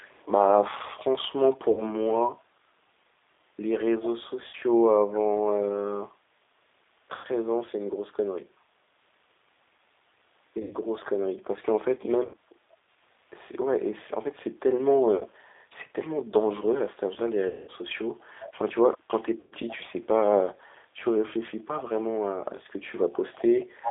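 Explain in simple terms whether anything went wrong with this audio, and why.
The whole recording sounds thin, slightly rough and a bit synthetic, like a cheap phone line. That comes from the G.729 codec, a phone-call compressor that rebuilds the voice from a simplified model and throws away everything above roughly 3.7 kHz.

At 1.71, 4.47, 7.15, 10.62, 12.25, 15.18, 17.47 and 19.40 seconds the sound briefly turns buzzy or smeared and fades. This is VoIP packet loss concealed by the speech codec. Chunks of the call went missing, from 30 ms up to 210 ms at 17.47 s, and the decoder filled each gap by stretching what it had last heard.

A faint, delayed copy of the sound trails behind by about 0.38 seconds at 0 to 0.26 s, 18.2 to 18.51 s, 18.98 to 19.02 s and 19.68 to 19.76 s, and it is clearest from 23.13 s to the end. This echo leak likely comes from a loudspeaker on the far end whose echo canceller didn't catch everything.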